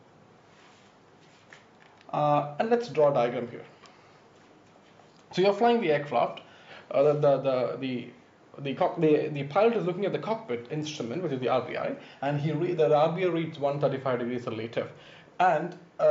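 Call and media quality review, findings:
Nothing to flag here; had a good listen and there's no problem to chase down anywhere in the clip.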